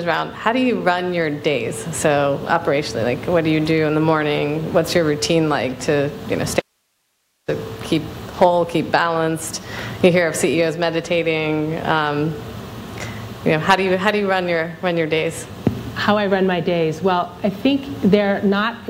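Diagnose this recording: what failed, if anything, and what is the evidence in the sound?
Audio dropout to a faint residue from 6.60 to 7.48 s: the sound cuts off abruptly for about 0.88 s, leaving only hiss roughly 50 dB below the signal, then returns mid-flow. The live path after the break likely points to an intermittent analogue connection upstream of the preamp.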